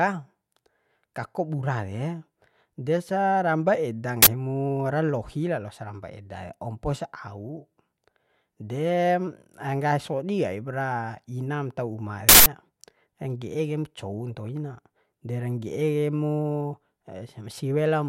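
At 4.22 s (43 ms) and 12.29 s (171 ms), uninitialised buffer playback outputs stale memory as loud digital noise, seen as waveform blocks and broadband spectrogram slabs.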